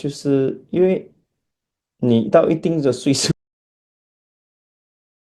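An audio dropout to silence at 3.32 s runs to the end: the speech stops abruptly into silence with no room tone left, likely from a lost input feed.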